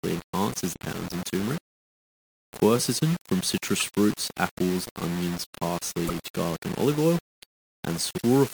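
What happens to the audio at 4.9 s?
The speech at 4.9 s, as throughout the clip, was likely quantised to very few levels and rounded without dither, a coarseness that fits roughly 5-bit resolution. This is low bit depth without dither. Because the rounding error tracks the waveform instead of being spread out as noise, it sits only about 15 dB below the speech and comes across as grainy, gritty distortion that shifts with the sound, sputtering on the quietest parts.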